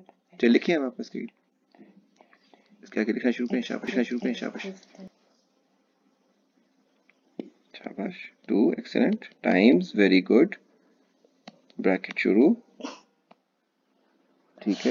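From 3.88 to 5.08 s, a doubled audio track appears: a second, equally loud copy of the sound trails the original by roughly 0.7 s, likely from a slower capture path or misaligned edit. Unlike an echo, it has no decay or room colouring, and cuts in and out abruptly.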